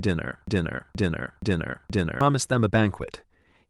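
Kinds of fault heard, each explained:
Broken-record loop: From 0.47 s to 2.21 s, the speech stops moving forward. One fragment 0.47 s long plays again and again, four times back to back, with no gap between the copies. Each repeat is identical. The likely cause is a stalled player or stream that kept resending the last piece of audio it held. The speech that belonged in those 1.7 seconds is lost, and normal speech resumes only when the loop ends.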